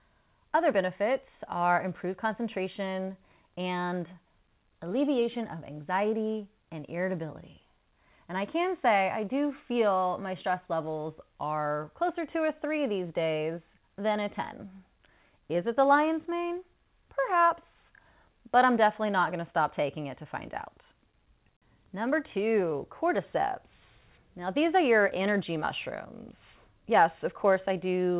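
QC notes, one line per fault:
Nothing stood out on listening to this speech, which comes over a telephone-band call path with nothing above 4 kHz, as a 64 kbps G.711 link gives.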